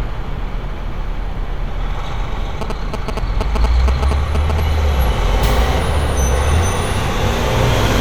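A recording of everyday sound carries GSM signalling bursts from 2.61 to 4.60 s: a galloping dit-dit-dit of short buzzes at a 217 Hz rate, only a little below the main sound, from a nearby 2G phone signalling while its radio pulses are rectified in the audio circuit. A spectrogram would show short clusters of evenly spaced vertical lines, and a waveform would show grouped spikes.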